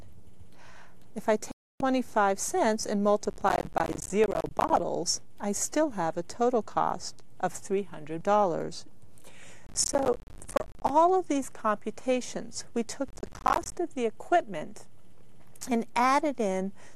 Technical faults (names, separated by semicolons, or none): digital broadcast dropout; processor overload crackle